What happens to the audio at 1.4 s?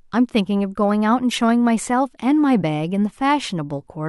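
A short squeaky burst of noise cuts into the speech from 1.31 to 1.38 s, ending just before 1.4 s. This is a corrupt frame decoded: a few compressed frames arrived with flipped bits and were played anyway, so misread gains spray fairly loud energy into wrong frequencies.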